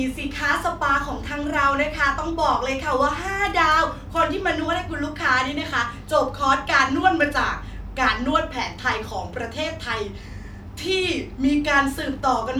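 No technical faults can be heard anywhere in this recording.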